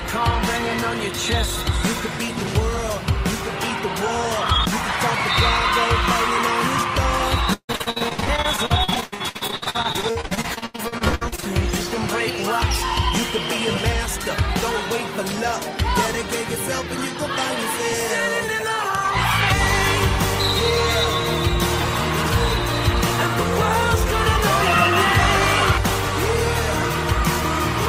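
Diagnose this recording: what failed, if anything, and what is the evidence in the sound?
The network stage failed: repeated packet loss (robotic sound) from 7.53 to 11.44 s. Dozens of short dropouts, the longest 152 ms, were each bridged by extending the last received sound, with about 1.7 s concealed, 44% of that stretch, giving choppy audio with pieces missing.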